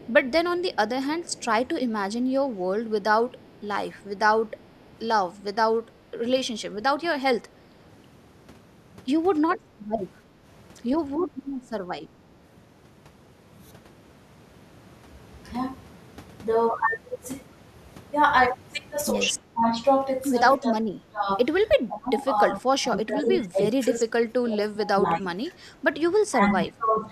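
From the start to 1.45 s there is an echo leak: a faint, separate copy of the speech trails the original by 311 ms, sitting roughly 25 dB below it. The likely cause is a far-end echo canceller that failed to fully remove what its microphone picked up from a loudspeaker, so that residue was sent back. Unlike room reverberation, which smears into a smooth decay, this is a distinct delayed repeat at a fixed lag.

Speech suppressed in double talk follows, likely from an echo canceller turning down the talker while it could not tell them apart from overlapping loudspeaker echo. The speech level briefly sags at 3.16–3.22 s and 9.97–10.02 s, and dips more noticeably at 7.02–7.41 s and 19.53–19.8 s. The deepest dips come at 20.58–21.28 s and through 21.86–27.07 s, where the speech drops by as much as 15 dB in broken pieces totalling about three and a half seconds. Unlike packet-loss dropouts, these are partial level dips rather than sudden silences, and they come and go with the overlapping talk.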